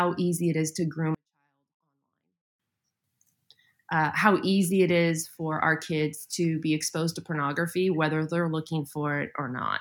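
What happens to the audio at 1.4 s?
At 1.4 s the speech has almost vanished. After "it is to groom", from 1.15 to 2.59 s, a 24-bit alignment error reads low-byte 24-bit samples as 32-bit, dropping the level by about 48 dB. The sound stays clean but barely audible.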